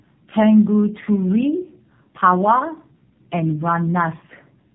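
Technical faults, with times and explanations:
Throughout, tandem speech coding: the speech sounds rough, muffled and warbly, with nothing above 3.6 kHz. The coloration fits two low-rate speech codecs in series, likely a G.729A-style coder followed by AMR-NB at around 7.4 kbit/s, with a plain A-law G.711 link between them. Each border decodes and re-encodes, so the second coder models audio the first has already smeared, and their errors compound.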